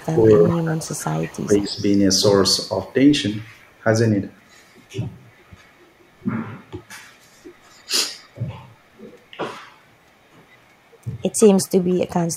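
This speech clip carries an echo leak: a faint copy trailing the voice by a constant 164 ms, about 20 to 40 dB down, at 0 to 0.65, 1.22 to 1.76, 3.74 to 3.81, 4.44 to 5.86, 7.52 to 8.35 and 10.31 s to the end. The fixed delay separates it from room reverberation. From 0 to 1.8 s, speech is suppressed in double talk: the voice dips by up to about 20 dB for roughly a second in total. The likely cause is an echo canceller ducking overlapping speech.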